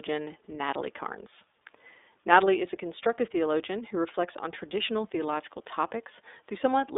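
Throughout, iLBC codec coding cuts everything above 3.8 kHz and makes speech rough and synthetic, unlike band-limiting alone; this fits 30 ms frames at 13.3 kbps.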